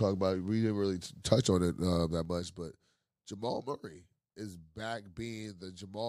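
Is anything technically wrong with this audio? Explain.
Yes. Zipper noise runs from 2.04 to 2.69 s. The level falls by around 15 dB in unsmoothed 3 dB jumps, around seven a second. Each step puts a small click into the speech, heard as a ticking that rides on it until the fade ends.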